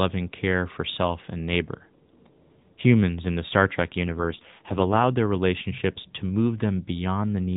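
Speech carried over the AMR-NB mobile codec, band-limited below 4 kHz, turns rough, buzzy and synthetic from 4.04 to 5.08 s, just before "their relationships to". This AMR rate drop fits a switch from 12.2 to 4.75 kbps, with the band unchanged and no gap.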